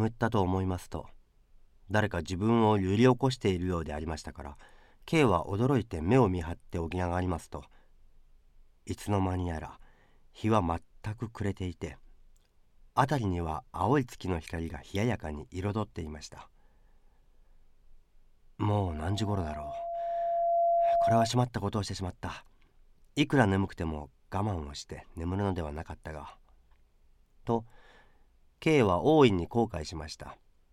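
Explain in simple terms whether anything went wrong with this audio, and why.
From 18.86 to 21.31 s there's loudspeaker feedback squeal: the mic catches its own speaker, and a 682 Hz tone swells over about two seconds.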